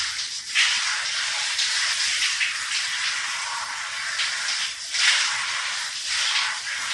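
Nothing in this recording of everyday sounds stood out as a technical fault on listening.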